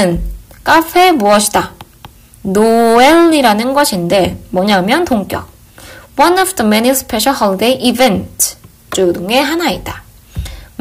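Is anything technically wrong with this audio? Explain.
Yes. Hard clipping runs through the whole clip. The level is pushed about 12 dB past what the signal path can carry, so every peak is sliced off flat at the ceiling. Only a few percent of samples go over, but they cluster on the loudest moments. Those squared-off tops create harmonics well above the original content. The result is a harsh, gritty fuzz on each loud passage, with crackle on the sharpest peaks.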